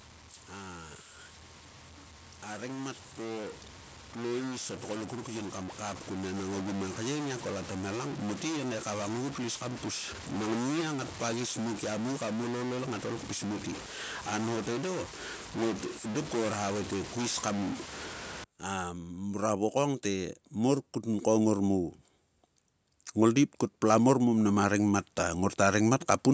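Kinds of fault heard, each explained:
Automatic gain rising: the gain control decided the input was too quiet and slowly turned itself up, so speech and background swell together. It happens three times: about 6 dB over 4.1–6.9 s, about 7 dB over 18.6–21.9 s, and about 5 dB over 23.1–26.1 s.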